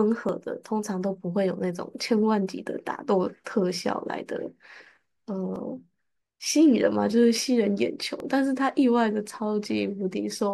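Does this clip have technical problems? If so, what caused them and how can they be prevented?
Yes. About four regular clicks occur every 2.63 s between 0.29 s and 8.2 s, likely clock drift buffer slips. Two devices running on separate clocks, roughly 500 ppm apart, let the buffer fill or empty until a short block of samples is dropped or repeated. Locking both devices to a single word clock, or resampling asynchronously at the boundary, prevents this.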